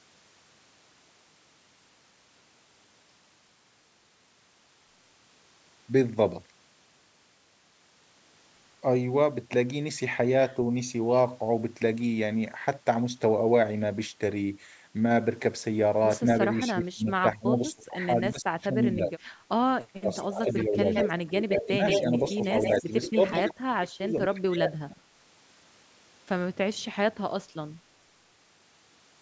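Speech suppressed in double talk first appears from 16.67 to 19.24 s, then again from 19.74 to 22.4 s and from 22.82 to 25.06 s. The speech drops in level by roughly 25 to 30 dB at its deepest, and across each stretch about one and a half to two seconds are pulled down or broken into pieces. The likely cause is an echo canceller that could not tell the near talker apart from the far side's playback while both spoke, so it attenuated everything.

Echo leak overlaps this, from 20.15 to 21.08 s and from 21.53 to 23.54 s. A second copy of the speech trails the original by 170 ms and sits only about 5 dB below it, so it comes through as a doubled repeat. This is likely a loudspeaker-side echo canceller letting part of its microphone pickup through and sending it back down the call.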